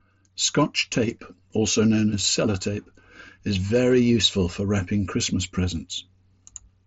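No technical faults are audible.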